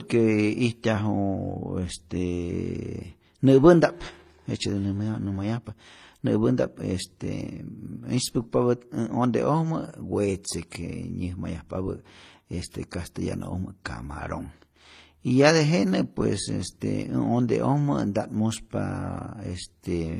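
Throughout the speech, nothing sounds above 14.9 kHz, and two different kinds of coding damage are stacked, the artefacts of each codec heard together. That layering, unlike a single codec, points to likely transcoding between lossy codecs, consistent with MP3 re-encoded as low-rate HE-AAC.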